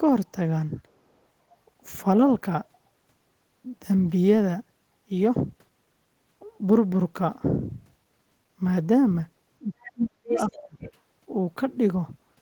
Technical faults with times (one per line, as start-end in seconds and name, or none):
9.62-10.83 speech suppressed in double talk
9.83-9.92 other side's voice leaking through
10.36-10.58 other side's voice leaking through
10.83-10.92 other side's voice leaking through